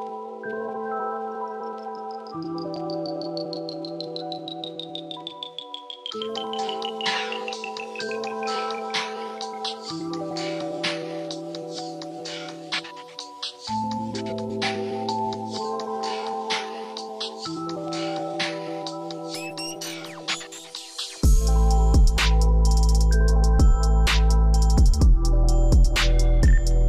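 Nothing goes wrong anywhere in this one, so there's no technical fault to point to at any moment in the audio.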